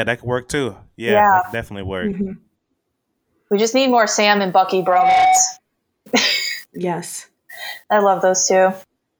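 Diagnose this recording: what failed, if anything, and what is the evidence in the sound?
Loudspeaker feedback squeal runs from 4.79 to 5.60 s. It is an acoustic loop at the analogue and playback stage, where the microphone hears the loudspeaker it drives. A single 747 Hz tone swells over roughly a third of a second and ends up a few decibels louder than the speech. At that frequency the round-trip gain through mic, amplifier, speaker and room went above one, so the tone kept reinforcing itself.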